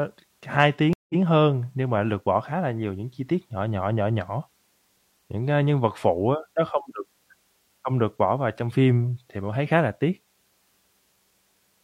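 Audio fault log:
0.93–1.19 s stream reconnect: a 163 ms silence, then playback restarts 93 ms earlier with a soft fade-in, so a sliver repeats, unlike a plain dropout.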